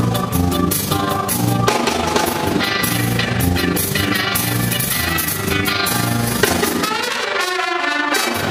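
From start to finish there's overlap-add ripple: the frames were rejoined with an overlap that doesn't sum to steady gain, so the level pumps by about 6 dB around 30 times a second, giving the whole sound a rough flutter.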